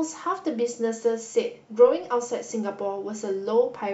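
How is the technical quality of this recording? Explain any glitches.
No glitches are audible anywhere in this speech recording, so there is nothing to explain.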